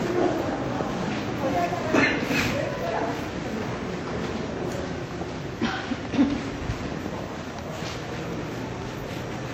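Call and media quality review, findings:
Transcoding between lossy codecs, throughout. Two distinct sets of coding artefacts heard together, band-limited with nothing above 16.2 kHz. Likely a WMA-style encode re-encoded to HE-AAC at a low rate, with the later codec spending bits on the earlier artefacts and stacking its own on top.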